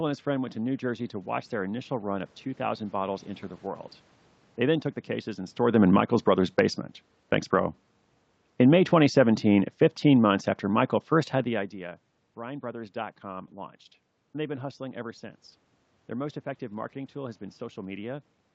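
From 4.6 s to 11.78 s the automatic gain falls. The gain control judged the input too loud, or its background noise too strong, and eased its gain down by about 8 dB over those seven seconds. Level sinks steadily, and the room noise sinks with it, which separates it from the talker's own movement near 5.5 s. On a waveform the envelope tapers like a slow ramp; a spectrogram shows every band, noise floor included, fading together.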